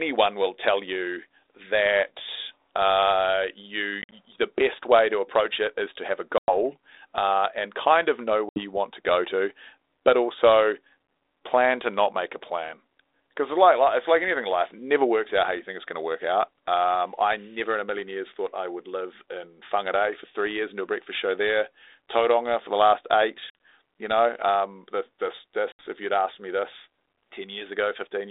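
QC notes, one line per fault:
4.02, 6.38, 8.49, 23.5 and 25.72 s, packet loss on an ADPCM call: dropped packets are filled with silence, leaving hard-edged gaps of 50 to 100 ms (70 ms scattered across 100 ms after "you that uh you", 70 ms after "and kind of know", 70 ms after "know um this this"). The decoder's adaptive predictor and step size then drift from the sender's, so sound resumes with brief distortion before settling.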